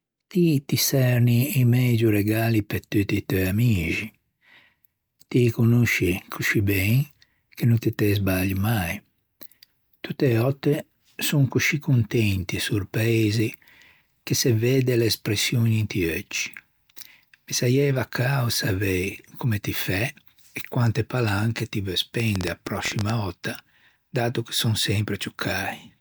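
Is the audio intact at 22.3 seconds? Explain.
No. A train of clicks runs from 22.20 to 23.11 s, around ten sharp pops at an irregular pace averaging 12.3 per second, standing roughly 15 dB above the speech. The likely source is electrical interference or a struggling interface injecting near-identical pulses. They are heard as uneven ticking over the sound. On a waveform they appear as narrow spikes poking above the signal envelope, and on a spectrogram as thin vertical broadband lines.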